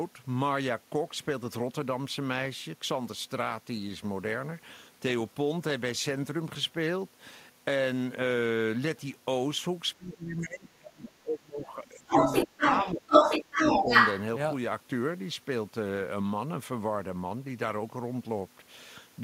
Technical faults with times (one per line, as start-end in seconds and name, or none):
9.96-12.16 speech suppressed in double talk
12.09-14.22 other side's voice leaking through
12.46-13.10 speech suppressed in double talk
13.43-13.90 speech suppressed in double talk